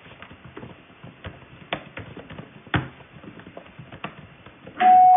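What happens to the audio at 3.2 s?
Nothing goes wrong at 3.2 s; the sound continues through that moment intact, with no dropout, click or other fault.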